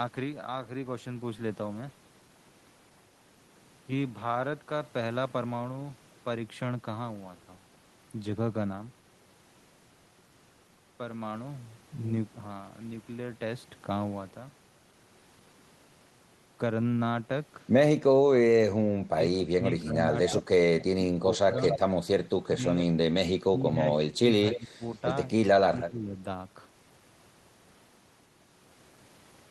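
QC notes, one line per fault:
19.11–21.54 s, 22.35–22.53 s, 23.33–24.83 s and 25.41–26.16 s: speech suppressed in double talk. The speech dips and breaks up in pieces. The deepest drops are about 20, 10, 15 and 25 dB. About a second, a fifth of a second, a second and under a second are affected in turn. Both ends were likely talking at once. The echo canceller could not tell this talker from the loudspeaker echo, so it turned everything down.
20.27–20.84 s, 21.37–21.79 s, 22.77–22.83 s and 24.51–25.01 s: echo leak. A delayed copy of the speech comes back, 266 to 269 ms behind it. It sits about 15, 5, 15 and 10 dB below the speech. The 21.37 s copy is nearly as loud as the speech. The far end likely plays the call on a loudspeaker, and its canceller let part of that sound through to be sent back.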